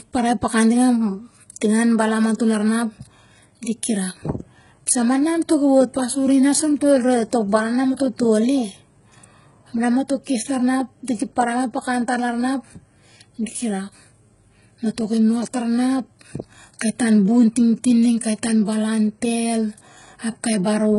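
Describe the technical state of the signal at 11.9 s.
At 11.9 s the speech carries heavy HE-AAC compression damage, which runs through the whole clip rather than just this moment. The lower band is coded directly, and the treble is rebuilt by copying it upward and shaping it with a coarse envelope, so s sounds turn gritty and metallic. The spectrum stops at about 11.1 kHz. Unlike a plain low-pass cut, the treble is still present but synthetic, which fits a likely very low bitrate near 12 kbps.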